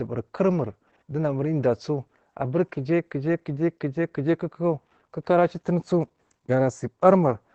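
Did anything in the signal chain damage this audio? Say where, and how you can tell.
Yes. Across the whole clip the speech sounds muffled, hoarse and faintly robotic, with nothing heard above about 8 kHz. The damage comes from the codec stage, as Opus voice compression. The sound points to Opus's linear-prediction voice coder running in wideband mode at a low bitrate, around 12 kbps. The band is cut at 8 kHz and the excitation is coded coarsely, which makes the voice sound hoarse.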